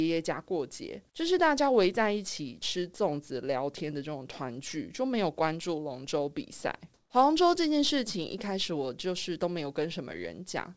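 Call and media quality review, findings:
Comfort noise in place of the background, 6.94–7.10 s (160 ms): room tone turns flat and featureless, level shifts about 3 dB. Likely sender DTX kicking in, receiver filling with synthetic noise, G.722 band-limited to 8 kHz.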